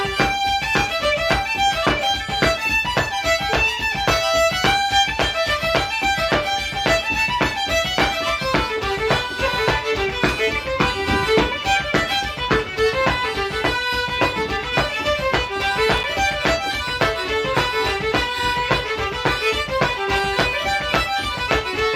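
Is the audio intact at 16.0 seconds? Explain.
No, loose connector crackle runs from 15.97 to 16.04 s: a worn contact making and breaking chops the signal into irregular scratchy bursts, unlike a single clean digital click.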